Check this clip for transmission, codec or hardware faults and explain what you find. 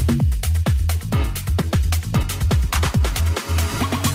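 Two transmission faults are present: a skip ahead near 1.6 s, followed by a jitter buffer speed-up.

Skip ahead, 1.61 to 1.63 s: roughly 0.7 s of audio never plays. It was lost in transit or discarded when an overflowing jitter buffer already held later audio. Playback lurches forward with no gap, so the two sides of the cut are joined almost directly and the sound changes abruptly. A waveform shows an abrupt discontinuity with no silence between the two sides. A spectrogram shows a hard vertical seam where the spectral patterns fail to line up.

Jitter buffer speed-up, 1.75 to 3.53 s: after the jump the buffer still held more audio than its target, so the receiver repeatedly removed short pieces of one or a few pitch periods. Playback runs at about 112% of normal speed with unchanged pitch. Around a fifth of a second is removed in total, and the passage sounds hurried. On a spectrogram the harmonics keep their spacing while events arrive closer together in time. 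The waveform shows whole cycles missing at many splice points.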